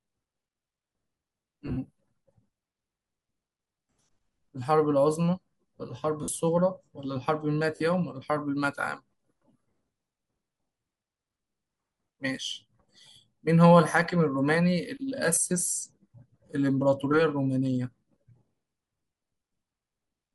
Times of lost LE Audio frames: 1.67-1.77, 6.23-6.28, 7.76-7.80, 15.35-15.37

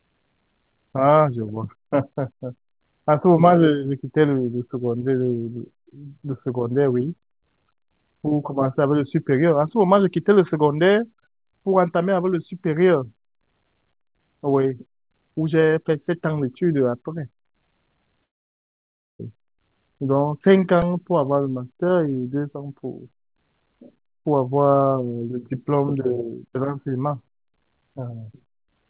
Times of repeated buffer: 20.82

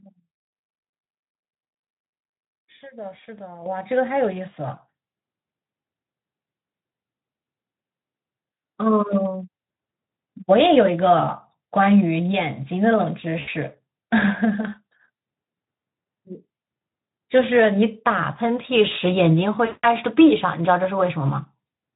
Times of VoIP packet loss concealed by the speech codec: 13.39-13.48, 19.65-19.86

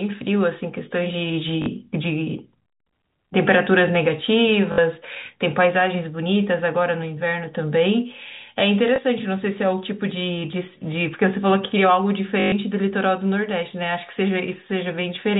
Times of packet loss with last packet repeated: 1.62-1.66, 4.72-4.78, 8.96, 12.40-12.52

